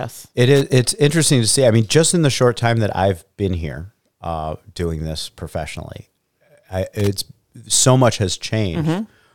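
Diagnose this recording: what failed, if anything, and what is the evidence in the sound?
Loose connector crackle appears at 0.56 to 0.61 s and again at 7.00 to 7.07 s in this speech recording: two short, irregular bursts of scratchy crackle. This points to the analogue wiring, where a worn or dirty contact briefly made and broke, chopping the signal.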